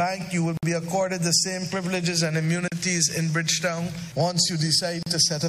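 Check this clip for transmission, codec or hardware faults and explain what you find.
Three short dropouts, all the same kind: a gap at a join of encoded pieces. They sit at 0.57 to 0.63 s (about 55 ms), 2.68 to 2.72 s (about 39 ms) and 5.03 to 5.06 s (about 37 ms). The sound cuts to silence with smeared edges, then picks up where it left off. The clip was probably encoded in segments and butted together untrimmed, so each join keeps one piece's padded tail plus the next one's encoder start-up delay.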